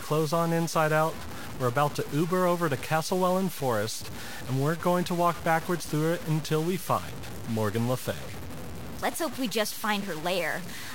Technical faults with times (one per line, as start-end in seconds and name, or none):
0.00-10.94 low bit depth without dither